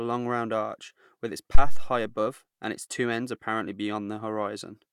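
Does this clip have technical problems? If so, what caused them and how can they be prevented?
Yes. A phantom power thump hits from 1.55 to 1.96 s. Switching the supply on the live input sends a voltage step through the coupling capacitors, producing a deep thump that decays in about 93 ms. Mute the channel before switching phantom power on or off.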